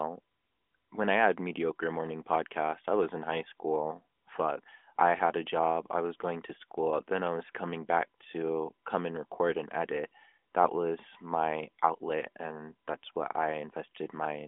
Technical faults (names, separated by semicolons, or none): none